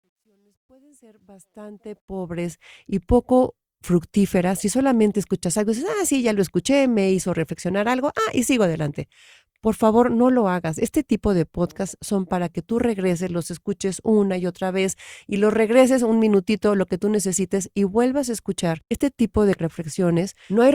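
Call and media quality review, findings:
Truncation distortion on fade, 0.00–2.69 s, worst 0.00–1.28 s. Fade-in gain stage drops low bits without dither, consistent with a 12-bit path. Quiet start turns gritty and stepped before the ramp clears at 2.69 s.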